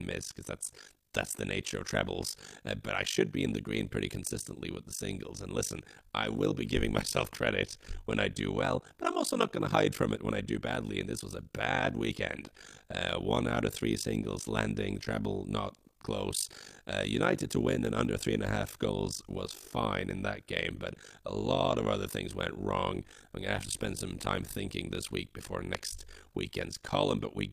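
Throughout the speech runs an overlap-add ripple: mismatched frame overlaps make the level dip by about 60 dB around 50 times a second, a rough robotic flutter steadier than natural tremolo. At 25.75 s, just after "thinking this week before", a single loud pop stands around 20 dB above the speech, likely from a voltage step, while the speech continues underneath rather than dropping out.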